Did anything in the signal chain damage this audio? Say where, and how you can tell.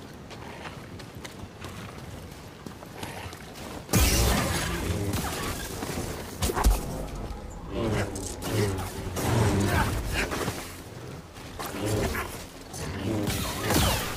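Yes. At 6.56 s there is a block of digital silence about 5 ms long, most plausibly from a driver or buffer underrun. The sound drops straight to silence and returns without any fade, so it is heard as a tick. The waveform shows a flat-line notch, and the spectrogram shows a thin vertical broadband stripe at each edge.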